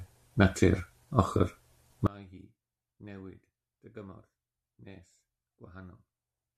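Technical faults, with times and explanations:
2.07–6.58 s, one channel inverted: the speech falls by about 27 dB, leaving a faint residue with the centred voice nearly gone. The likely cause is one stereo channel with reversed polarity, so shared content cancels in a mono sum.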